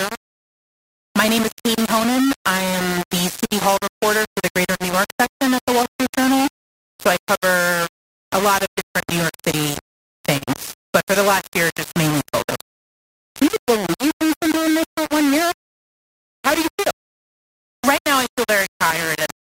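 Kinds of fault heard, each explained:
Low bit depth without dither: The speech sounds harsh and grainy throughout, with a gritty buzz almost as loud as the voice that changes as the voice changes. This likely comes from rounding the signal to very few levels, which fits about 3 bits.
Clock drift between sender and receiver: The pacing feels faintly unsteady from start to finish, with small hiccups at uneven intervals. The sender's clock runs roughly 3% slower than the receiver's, so the receiver keeps adjusting to stop its buffer running dry.
Repeated timing corrections: Across the whole clip the receiver repeats short pieces to stay in step, playing the speech at 99% speed overall and adding roughly 200 ms in total. Each edit is tiny.
Scattered short gaps: About ten brief ticks or smears occur between 3.5 and 18.5 s, the longest around 40 ms. Each marks a lost or late packet that the receiver patched by continuing the last sound, roughly 300 ms altogether.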